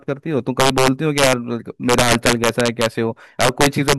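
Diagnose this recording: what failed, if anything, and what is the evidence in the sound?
Harsh, violent cracks burst out of the speech throughout the clip, landing only on the loudest moments and sounding far sharper and more broken than ordinary clipping. This is integer overflow in the gain or sample-format conversion stage. The signal was driven about 6 dB past full scale in integer arithmetic, and instead of being limited, each peak wrapped around to the opposite extreme. Only a small fraction of samples, around one or two percent, crossed the limit.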